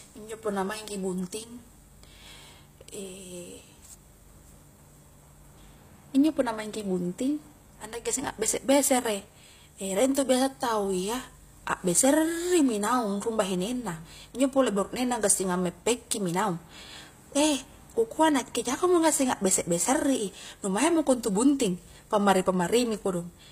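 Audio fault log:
throughout, HE-AAC compression: the encoder likely spent its bits only on the lower spectrum and synthesised the treble by copying lower bands upward under a coarse envelope, which fits a low bitrate around 24 kbps. The damage is plainly audible: the rebuilt highs are not the original and their harmonics do not line up with the coded band below, so s sounds in the speech come out gritty and lispy, and nothing remains above 15.5 kHz.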